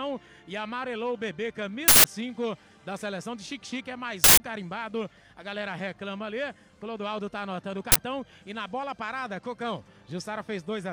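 A playback buffer was sent out before any audio had been written into it, an uninitialised buffer fault, so stale memory was read as samples. This produces harsh, loud bursts of digital noise at 1.88 to 2.04 s and 4.24 to 4.40 s (both 160 ms blocks) and a loud crack at 7.92 to 7.96 s (40 ms).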